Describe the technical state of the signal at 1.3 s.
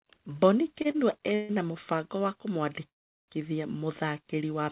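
At 1.3 s the signal is entering a call audio freeze, running from 1.35 to 1.51 s. Packets were likely held up in transit, leaving the jitter buffer empty, so the receiver stretches the last sound into a buzzy hiss that fades for about 142 ms without dropping to silence. Nothing is lost, and everything after resumes roughly 142 ms late. A spectrogram shows a smeared, repetitive band capped at 4 kHz by the G.711 path, and the waveform shows a decaying, periodic stretch.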